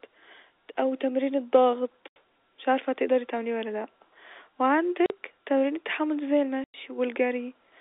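Packet loss filled with silence hits three times: 80 ms at 2.08 s just before "مش عارفه هتقدري تعمليه", 40 ms at 5.06 s ahead of "تمارين التحمل دي زي", and 100 ms at 6.64 s right after it. All the holes are multiples of 20 ms, which fits 20 ms packets dropping and the receiver playing nothing in their place. Each cut has hard edges through the band-limited G.711 telephone sound.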